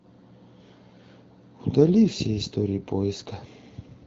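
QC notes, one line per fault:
No faults found; the speech comes through the AMR wideband (HD Voice) path at 12.65 kbit/s with the light coding texture expected at that rate.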